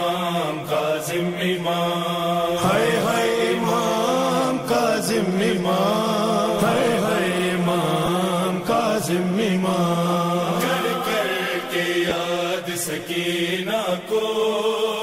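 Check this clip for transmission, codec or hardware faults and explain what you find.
Two short dropouts of lost LE Audio frames are present, at 8.06–8.08 s and 12.09–12.11 s. Each loses about 15 ms of audio, which fits two missing frames. The LC3 decoder fills each gap by repeating the previous spectrum with randomised signs, so the sound briefly turns into a noisy smear.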